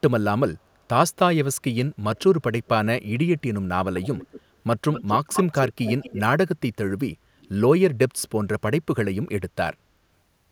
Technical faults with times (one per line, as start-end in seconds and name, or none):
2.16-2.20 echo leak
4.02-4.41 echo leak
4.93-6.21 echo leak
7.41-7.49 echo leak